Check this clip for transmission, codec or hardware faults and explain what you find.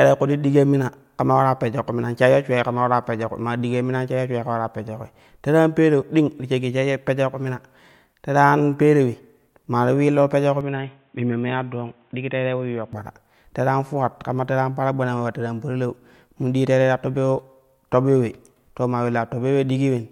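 One fault is present in this speech clip. Input switched to a poorer device, 10.61 to 12.93 s, just after "pejyo ku": likely a narrower-band microphone, cutting everything above 3.8 kHz, quieter by roughly 5 dB, with faint new noise and no gap.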